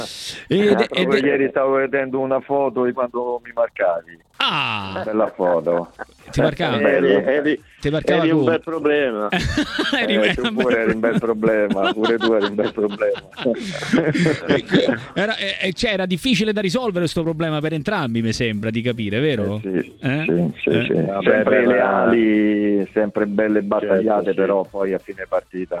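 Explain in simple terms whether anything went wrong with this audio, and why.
Three times the sound turns dull and gritty, losing its crispness: from 6.94 to 8.87 s, from 12.02 to 15.96 s, and from 25.32 s to the end. This is a Bluetooth SBC bit pool drop. The wireless link got crowded, so the phone sent the audio with much less detail to keep it playing.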